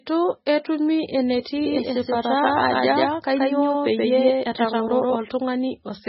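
Throughout the speech, heavy MP3 compression, likely at a very low bitrate around 16 kbps, leaves nothing above 5.6 kHz and gives a watery, swirly quality. From 1.66 to 5.16 s a doubled audio track appears: a full-band copy about as loud as the original, trailing by around 150 ms. It likely comes from a second capture path or a misaligned edit, and it starts and stops abruptly.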